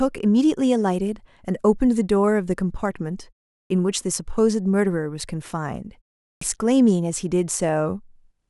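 At 3.63 s and again at 6.34 s, speech resumes with a clipped start after a pause of about 0.4 s: the output device, waking from silence, swallows roughly 72 ms and 74 ms of onset. The waveform jumps abruptly from flat into speech, and the spectrogram shows missing initial energy.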